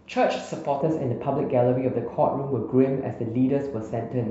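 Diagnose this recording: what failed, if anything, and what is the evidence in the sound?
De-emphasis was applied wrongly at the playback stage: a treble-cut filter meant to reverse pre-emphasis acted on speech that had none, or was applied twice. From 0.81 s to the end, the highs slope smoothly away, about 11 dB down at 10 kHz relative to 1 kHz, leaving the speech dull and muffled.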